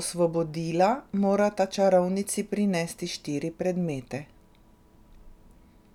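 No technical faults can be heard in the speech at any point, and the signal stays steady and continuous throughout.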